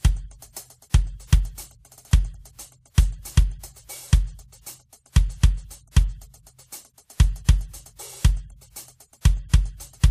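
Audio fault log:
throughout: transcoding between lossy codecs. Music shows swirly low-rate smearing plus a second codec's texture, likely low-bitrate MP3 re-encoded as WMA; nothing above 15.3 kHz.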